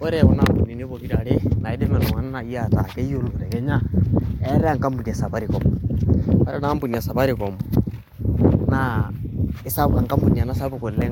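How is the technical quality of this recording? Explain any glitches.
No technical glitches are audible anywhere in the recording.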